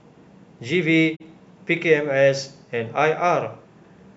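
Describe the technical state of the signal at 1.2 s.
The receiver lost the digital stream, or a frame failed its checksum, and muted its output until clean frames arrived again: a digital broadcast dropout running from about 1.15 to 1.22 s. The speech fades out over roughly 20 ms into a short hole of silence, and about 32 ms of what was transmitted never reaches the listener, which points to a single lost frame. The speech then resumes partway along, leaving a brief audible gap.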